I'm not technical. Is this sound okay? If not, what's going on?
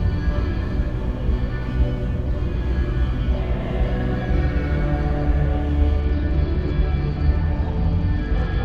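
No. From 6.0 s until the end, the audio shows a Bluetooth SBC bit pool drop. The wireless link from the phone got crowded, so the phone cut back how much detail it sends each moment to keep the sound from stopping. The highest, crispest parts of the sound are dropped first and the rest is stored more roughly, so in those final seconds it turns dull and muffled, with a gritty, sandy noise mixed in.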